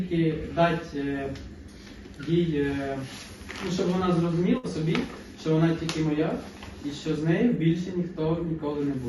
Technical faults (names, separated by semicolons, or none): burst of packet loss